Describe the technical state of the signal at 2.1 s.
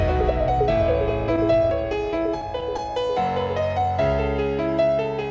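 At 2.1 s the audio sits inside a run of scattered short gaps, from 1.36 to 2.80 s. About ten tiny holes, each around 10 ms, were patched by extending the preceding sound. Together they cover roughly a tenth of a second. They are heard as brief ticks and smears. The band stops at 8 kHz, which fits a G.722 call codec.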